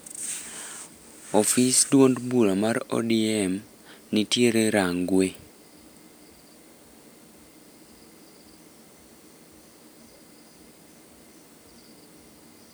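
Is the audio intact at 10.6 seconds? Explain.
Yes, the speech at 10.6 seconds is intact, with no audible fault at that moment.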